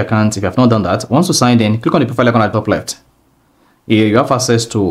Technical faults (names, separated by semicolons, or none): compressed frames skipped